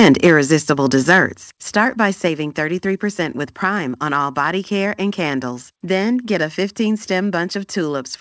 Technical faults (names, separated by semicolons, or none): microphone overload; microphone volume stepped down